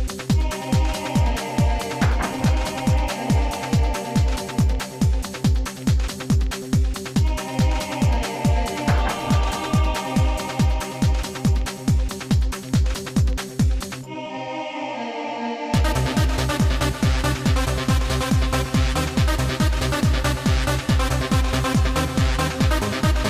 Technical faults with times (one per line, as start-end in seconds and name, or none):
none